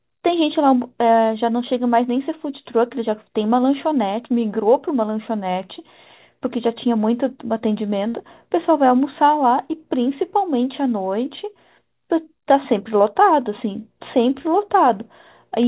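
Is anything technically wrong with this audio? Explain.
Yes. At 8.08 to 8.16 s there is a burst of packet loss: about 55 ms of the last sound is stretched and faded into a buzz or hiss, then 60 ms of audio is skipped. Unlike a plain dropout, the gap is filled with sound rather than silence. The speech stays band-limited to 4 kHz, as the G.711 call path carries it.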